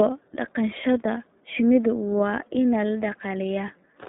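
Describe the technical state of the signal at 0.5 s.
At 0.5 s, as throughout, the iLBC codec codes each 30 ms frame independently within 200 Hz to 3.7 kHz, leaving speech muffled, rough and audibly synthetic.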